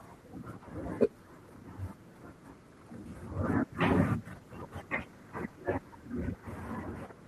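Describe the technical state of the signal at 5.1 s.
At 5.1 s the speech is mid call bitrate drop (3.38 to 6.75 s): the encoder fell from 32 to 18 kbps, so it's coded coarsely and sounds rough.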